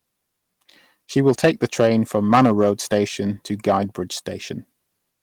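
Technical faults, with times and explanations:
1.17 to 2.98 s, hard clipping. The speech is driven about 10 dB past what a stage in the chain can pass. Every peak above that limit is sliced flat instead of rounding over. Those flat tops add harmonics high up the spectrum. With an overload this large, the effect is not a few clicks on peaks. Every loud syllable in this stretch carries a harsh, buzzy fuzz.
2.35 to 2.37 s, lost packet rebuilt from error correction. A 20 ms piece of audio was lost in transit. The packet after it carried a low-bitrate copy, and the decoder played that copy instead. So there is no gap or dropout. The patched moment sounds rougher and noisier than its surroundings, which fits one lost packet. It falls inside the clipped stretch, so it sits under the distortion.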